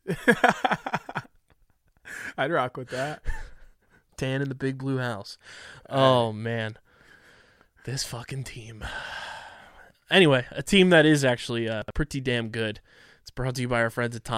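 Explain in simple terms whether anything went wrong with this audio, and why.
A short piece of audio arrived late and was played out of turn, a fault called chunks out of order. Around 11.82 to 11.90 s, between "that is actually uh" and "pretty damn good", a sliver of sound about 21 ms long plays roughly three pieces too late, so that moment sounds jumbled.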